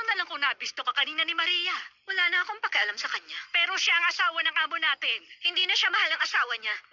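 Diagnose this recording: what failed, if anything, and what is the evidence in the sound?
The failure is aliasing at the sample-rate conversion stage, audible from start to finish. Content above 6 kHz folds back below it as gritty, unrelated tones around 15 dB under the signal, with energy packed hard against a 6 kHz edge, which fits an unfiltered drop to a 12 kHz rate.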